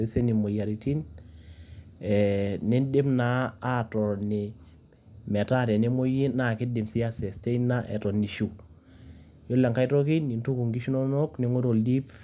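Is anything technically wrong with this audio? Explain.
No, nothing technically wrong stood out on listening to this speech recording.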